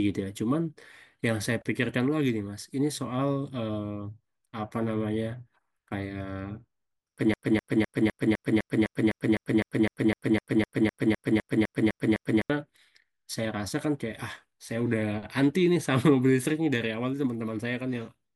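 A stalled player, encoder or stream likely kept resending its last buffered fragment, producing a broken-record loop in this speech recording: from 7.34 to 12.50 s, a 0.25 s slice repeats exactly, back to back, 20 times, and the speech that belonged there is lost.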